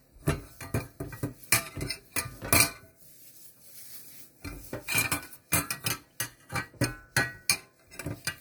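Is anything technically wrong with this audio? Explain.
No, nothing technically wrong can be heard anywhere in this audio.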